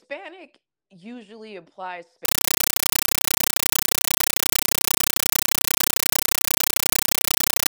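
From 2.25 s to the end, the speech gives way to a compressed stream played as audio. Undecoded AC-3 data, which fits what is heard, becomes loud static in 8 ms bursts 31.25 times a second. That steady gated chatter sets it apart from random digital noise.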